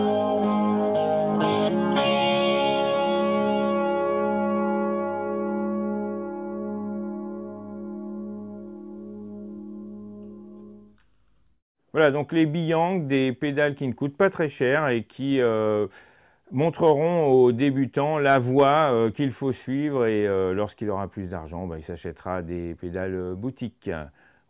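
No technical faults can be heard anywhere in the clip. Nothing breaks into the sound at any point, and nothing about it calls for comment.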